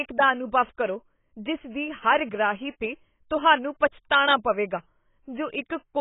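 AAC compression artefacts run through this whole speech clip: nothing remains above about 3.8 kHz, and the sound is dull and smeared with a warbling, fizzy texture on sustained sounds and sibilants. That heavy damage is likely AAC-LC at a starved bitrate, which fits roughly 16 kbps.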